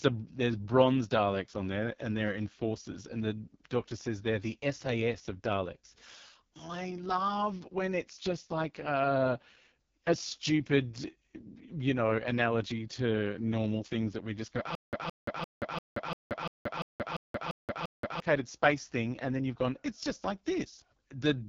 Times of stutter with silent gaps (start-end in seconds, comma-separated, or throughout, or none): 14.75-18.20